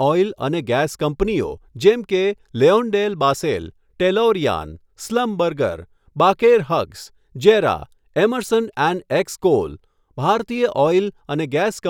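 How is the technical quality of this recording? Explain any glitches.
No glitches or technical faults can be heard anywhere.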